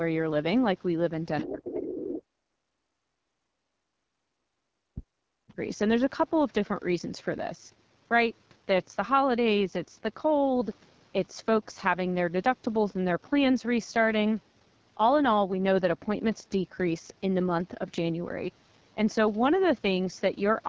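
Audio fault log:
Throughout: AMR wideband (HD Voice) codec. The speech was coded with AMR-WB at 8.85 kbit/s, one of its lowest rates, where the pulse-driven vocal tract model has too few bits to follow the voice closely. The result is plainly audible damage: a rough, raspy texture, and a top band between 6.4 and 7 kHz that is only shaped noise rather than real detail.
1.36 to 1.48 s, 1.75 to 2.03 s and 5.5 s: other side's voice leaking through. A far-end voice is likely playing on the talker's loudspeaker and not being fully removed by the echo canceller, so scraps of a second voice pass into the microphone signal. They sit about 15 dB and about 10 dB below the talker in the first two bursts, and only faintly, about 30 dB down, in the brief one at 5.5 s.
1.43 to 2.92 s, 3.20 to 3.36 s and 3.57 to 5.59 s: speech suppressed in double talk. With both sides talking at once, the echo canceller likely could not tell its own talker from the loudspeaker echo and clamped down on everything. 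The talker's voice dips sharply, by as much as about 40 dB at its deepest, for roughly a second and a half in the first and last spans and a brief moment at 3.2 s.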